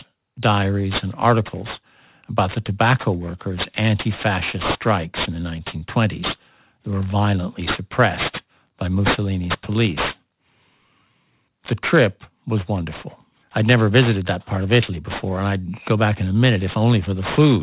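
Aliasing runs through the whole speech clip. The sample rate was dropped without a proper low-pass filter first. The spectrum folds at 4 kHz, which fits a conversion from 44.1 kHz down to 8 kHz. Energy that sat above 4 kHz did not vanish. It folded back into the band as false, unrelated tones. That folded energy sits only about 10 dB below the wanted signal. Sibilants sound gritty and metallic, and the top of the spectrum stays dense right up to the edge.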